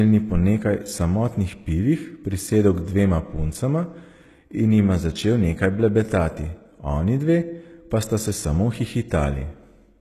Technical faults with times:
0.00-10.01 HE-AAC compression

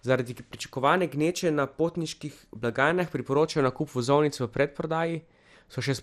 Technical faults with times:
0.00-6.03 MP2 compression
1.21-1.46 DAB burbling
2.90-3.13 DAB burbling
5.31 DAB burbling

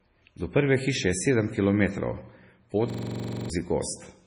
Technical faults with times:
0.00-4.26 MP3 compression
2.90-3.50 system hang loop

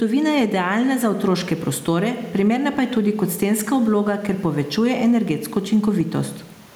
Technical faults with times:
0.00-6.76 gain pumping

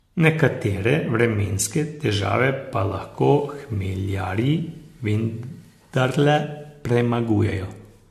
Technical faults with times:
0.00-8.10 generation loss

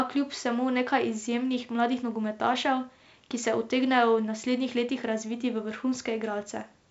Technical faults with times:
none

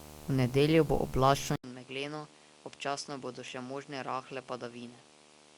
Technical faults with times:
0.00-5.57 video or display buzz
1.56-5.57 input switched to a poorer device

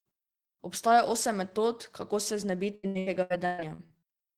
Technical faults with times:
2.75-4.05 repeated packet loss (robotic sound)

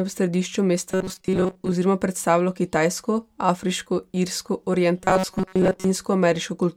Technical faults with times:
0.91-1.72 robotic sound from repeated short buffers
4.98-5.91 robotic sound from repeated short buffers

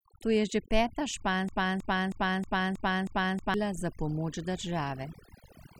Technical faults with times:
0.00-5.79 overdone noise removal
1.49-3.54 broken-record loop

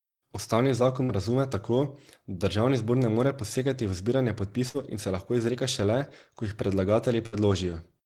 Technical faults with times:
1.03-1.12 burst of packet loss
4.69-4.77 burst of packet loss
7.26-7.35 burst of packet loss

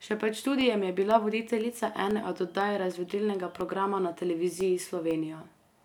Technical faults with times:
0.11-5.61 periodic USB or driver dropouts

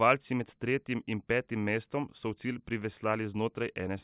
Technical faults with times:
none

